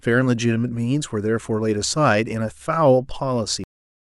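At 3.64 s the speech is chopped off mid-sound, a cut-off end. The final stretch of audio, about 0.41 s, was never written out, so the recording simply stops rather than letting the sound finish or decay. It is heard as an abrupt halt straight into dead digital silence. On a waveform the signal ends in a vertical wall down to a flat line, and a spectrogram shows energy ending along a sharp vertical edge with nothing after it.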